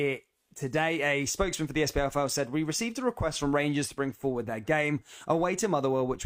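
No technical fault can be heard anywhere in the audio; the signal stays continuous and intact throughout.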